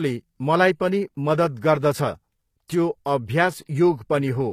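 All the way through, the speech has a gritty, metallic top end that stops at 14.9 kHz, likely HE-AAC compression rebuilding the treble from copied lower bands.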